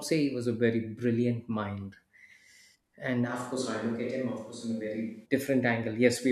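At 3.29 s the close microphone likely drops out, and a switch to a distant microphone carries the speech until 5.24 s. The sound turns abruptly roomy, hollow and thin in the bass, at much the same level, with faint room noise far beneath it.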